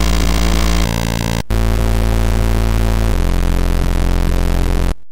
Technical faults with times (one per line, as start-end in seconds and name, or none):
0.00-3.12 section at the wrong speed